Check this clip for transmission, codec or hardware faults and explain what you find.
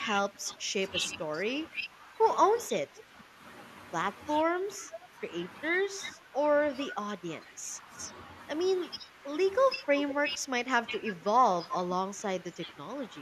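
Two faults run through this speech clip. The worst is repeated suppression, with a couple of faint echo scraps.

Speech suppressed in double talk, at 0.31–2.18, 2.71–3.36, 4.44–6.36, 6.91–8.14 and 8.98–13.15 s: the voice dips by up to about 10 dB in patches, likely because the echo canceller ducked everything while both ends talked.

Echo leak, at 2.98–3.03 and 10.11–10.15 s: brief copies of the voice arrive 473 ms late, about 25 and 15 dB down. That's likely loudspeaker pickup the far-end canceller didn't fully remove.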